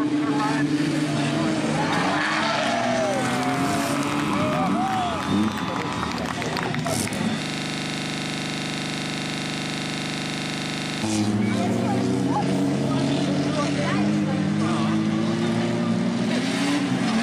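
From 7.43 to 11.03 s the sound locks into a rigid 25 Hz buzz: a 40 ms fragment repeats exactly, about 90 times. This is a system hang loop, where the computer or driver froze while the audio hardware kept replaying the same ring buffer.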